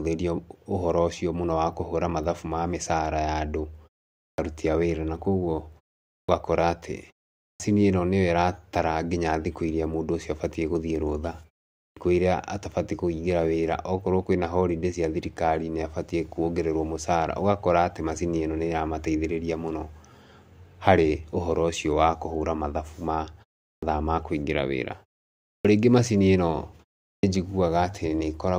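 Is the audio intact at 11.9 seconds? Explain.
No. A clipped start after a pause runs from 11.84 to 11.97 s. After "gũthiĩ rũtha" and a 0.42 s pause, the output wakes late. About 125 ms of speech is swallowed, so it begins abruptly.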